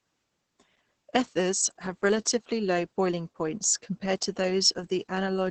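From start to finish the speech sounds muffled, hoarse and slightly robotic, with nothing above about 8.9 kHz. This is Opus voice compression running in its SILK linear-prediction mode at wideband. The band limit and the heavy, coarse rendering of the voice's excitation point to a very low bitrate, roughly 10 kbps, coded in 20 ms frames. At that rate the coder keeps the broad vocal shape but loses breath and texture, which leaves the grainy, synthetic edge.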